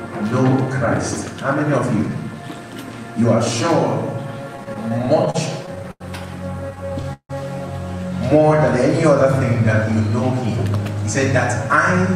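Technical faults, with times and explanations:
4.57 to 6.02 s and 6.70 to 7.31 s, repeated stalls (stutter): The sound keeps halting and resuming. The first stretch has 13 short stalls filling 248 ms, about a sixth of the span, the longest 90 ms. The second has 6 stalls filling 211 ms, over a third of it, the longest 161 ms. Audio arrived late, so the playback buffer emptied each time. The receiver stretched the last sound until more came. Nothing is lost, but the sound drags and stutters.
10.48 to 11.07 s, jitter buffer speed-up: The sound briefly runs about 7% fast with no change in pitch, so it feels hurried. The receiver was holding more audio than it wanted, likely after delayed data arrived in a bunch. To catch up, it cut many tiny slices of a pitch period or so, about 50 ms in total.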